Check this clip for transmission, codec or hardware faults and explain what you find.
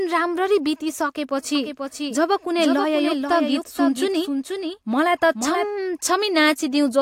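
One fault: a doubled audio track from 1.55 s to 5.65 s. A full-band copy of the speech runs about half a second behind, a few dB quieter, likely from a second, slower capture path. On a waveform and spectrogram, each syllable's pattern repeats at a fixed offset, with no decay tail, and the copy begins and ends abruptly.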